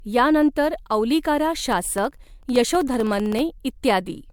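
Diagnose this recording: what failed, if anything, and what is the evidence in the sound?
The speech sounds swirly, hollow and smeared throughout, with blurred consonant attacks and nothing above 20 kHz. That is more damage than a single 128 kbit/s MP3 pass would explain, so the stage is the codec, and the likely cause is generation loss: the audio was decoded and re-encoded around seven times. Each pass requantised it on a shifted frame grid, so the coding noise and spectral holes piled up.

From 1.60 s to 3.39 s there is a steady train of small ticks, one every 64 ms, about thirty in all. Each tick comes from a gap of roughly half a millisecond where the signal drops to silence and then resumes. These are periodic USB or driver dropouts at the driver or buffer stage. A background task stalls the bus or driver at a fixed interval, so a sliver of audio is replaced by silence each time.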